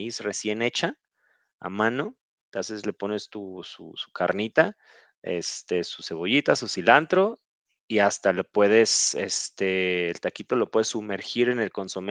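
No technical faults can be heard anywhere in the recording.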